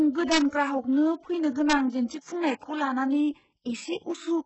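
Throughout the speech, heavy codec damage points to HE-AAC compression as the likely cause, at a quality that fits an 8 kbps bitrate. Treble is rebuilt by copying lower bands upward, so sibilants turn gritty and metallic. A spectrogram shows nothing above 8 kHz and smeared, repeated texture in the upper band.

At 0.32 to 0.38 s and again at 1.70 to 1.73 s comes integer overflow. Peaks pushed about 1 dB past the integer limit wrap to the opposite sign instead of being held, giving sharp cracks, sharper than clipping. The waveform shows samples jumping from one extreme to the other, and the spectrogram shows brief broadband vertical streaks.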